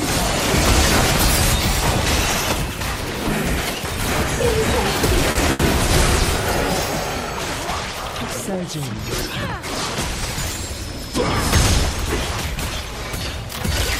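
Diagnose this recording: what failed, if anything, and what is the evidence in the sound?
The fault is at the network stage: two short stalls from a late packet, close together. At 5.31–5.37 s the sound hangs for about 40 ms, and at 5.51–5.61 s for about 80 ms. Each time, the jitter buffer ran dry and the receiver stretched the last sound until the packet arrived, then resumed where it left off, so nothing is lost but playback falls 40 ms and then 80 ms further behind. On a spectrogram each stall shows as flat, smeared horizontal bands. On the waveform it looks like a repeated, slightly dipping stretch of cycles.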